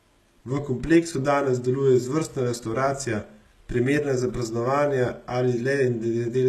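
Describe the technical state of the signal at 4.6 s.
At 4.6 s, as throughout, the speech has gritty, lispy sibilants and a hard ceiling near 12.3 kHz, likely HE-AAC compression rebuilding the treble from copied lower bands.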